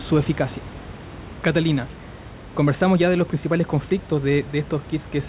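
No technical faults can be heard in this speech.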